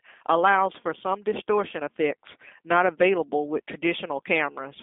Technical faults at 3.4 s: G.729 codec

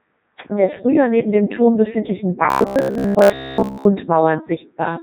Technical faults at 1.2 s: Codec 2 vocoder

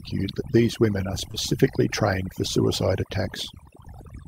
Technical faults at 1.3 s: overdone noise removal; short concealed packet loss; lost packet rebuilt from error correction

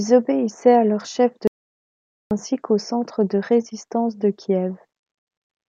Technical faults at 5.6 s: none

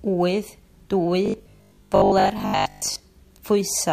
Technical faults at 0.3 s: none

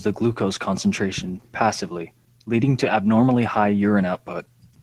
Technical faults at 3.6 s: Opus voice compression

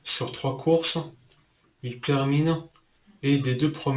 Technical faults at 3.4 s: aliasing

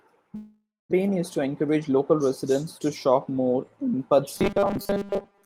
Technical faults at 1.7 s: jitter buffer speed-up

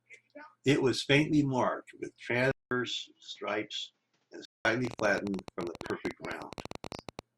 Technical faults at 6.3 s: train of clicks

